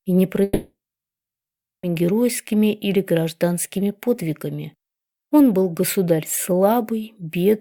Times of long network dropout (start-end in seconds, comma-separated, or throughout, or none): 0.43-1.85